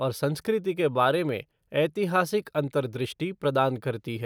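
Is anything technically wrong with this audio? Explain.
No, nothing technically wrong shows up anywhere in this speech recording.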